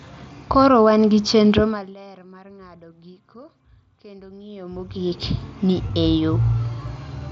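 From 4.42 s to 5.25 s, just after "mar ng’ado giko kendo" and ending before "ni e", there is zipper noise. The level moves by about 25 dB in unsmoothed 1 dB steps, around thirty a second, so a fine ticking rides on the speech. A proper fade would glide silently.

At 5.88 s there is concealed Bluetooth headset packet loss. About 15 ms of audio, which fits a couple of lost frames, was patched by repeating recent waveform. The gap is filled rather than silent, leaving it nearly hidden instead of a click or dropout.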